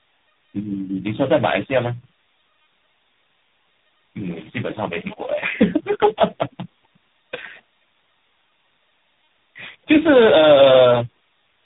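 From start to finish the speech shows tandem speech coding. The signal has passed through several codecs in a row, each decoding and re-encoding the previous coder's already degraded output, so the errors stack up. The result is rough, muffled and warbly speech, with nothing above about 3.8 kHz. The character fits around three speech coders in series, ending in something like AMR-NB at 7.4 kbit/s.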